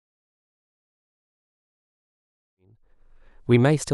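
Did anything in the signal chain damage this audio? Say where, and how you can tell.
No, nothing in the signal chain damaged this audio.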